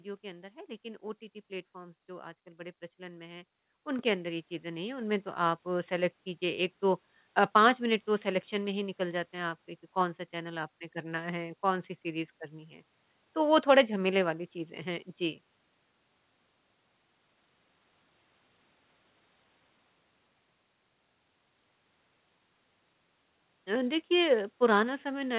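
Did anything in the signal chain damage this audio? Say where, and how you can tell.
Yes. At 3.99 s the speech and the background noise jump up together by about 7 dB and stay louder. This is a microphone volume stepped up at the call-processing stage, where automatic gain control raised the device's input level in one step. The G.711-style call path, with nothing above 4 kHz, carries the jump through unchanged.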